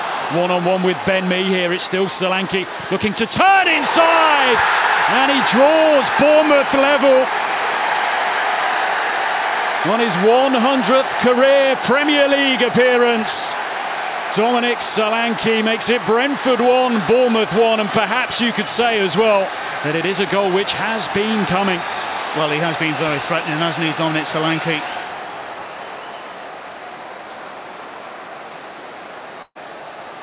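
Near the very end, from 29.42 to 29.65 s, a burst of packet loss interrupts the sound. About 120 ms of audio never arrives, so the receiver stretches the last fragment into roughly 130 ms of repeated, fading concealment, followed by about 50 ms of silence before the sound resumes further along. On a waveform this shows as a short stretch tapering to a flat gap. On the spectrogram, repeated bands, capped at 4 kHz like the rest of the call audio, fade out before the resumption.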